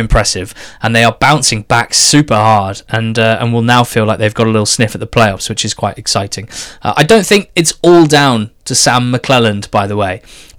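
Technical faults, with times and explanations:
Throughout, hard clipping: the loud parts of the speech carry a harsh, crackly fuzz. The signal is driven about 10 dB past what a stage can pass, so a few percent of the peaks are sliced flat. Those flattened tops spray extra harmonics high into the spectrum.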